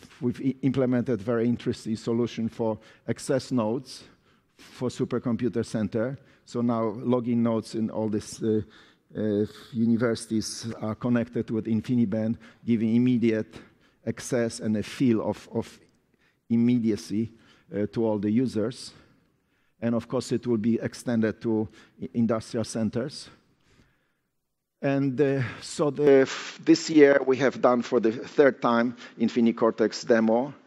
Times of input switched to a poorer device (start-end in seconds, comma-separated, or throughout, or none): 26.07-30.67